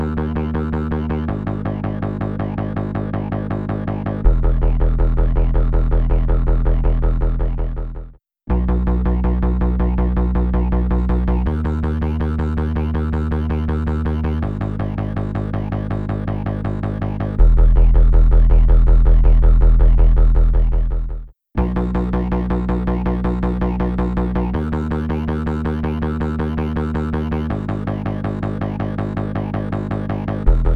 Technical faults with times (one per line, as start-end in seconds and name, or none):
10.98-30.75 pre-emphasis left on